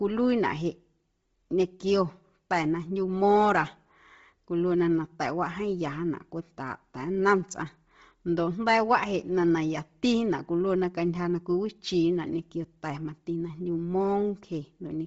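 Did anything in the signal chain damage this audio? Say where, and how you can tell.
Yes. The damage sits at the codec stage and runs through the whole speech clip. The sound is breathy and grainy, and the spectrum stops dead at about 7.7 kHz. This is likely Bluetooth LC3 compression. The codec dropped most of the upper detail and filled the gaps with shaped noise, so the top end hisses instead of carrying real content. The heavy damage points to a low bitrate near 24 kbps, with framing that fits 7.5 ms frames.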